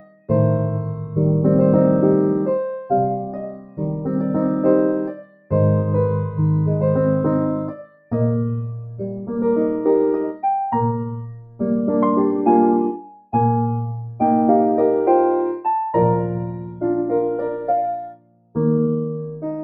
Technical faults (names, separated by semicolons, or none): noise suppressor applied to music or sounds; sound cut by the noise suppressor